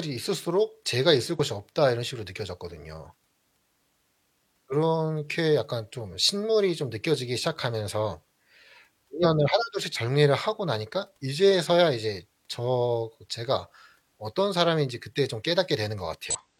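Damaged data in a compressed stream corrupts the speech three times. At 1.35 to 1.40 s, 9.20 to 9.25 s and 16.30 to 16.36 s, bytes in the encoded stream are wrong, so the decoder misreads those frames, loses sync and has to hunt for the next valid frame header. Each time, the result is a brief chirp, squawk, click or short hole lasting about 50 to 60 ms that cuts through the speech before normal decoding resumes.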